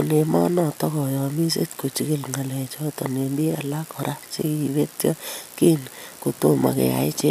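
No technical faults can be heard in this speech recording.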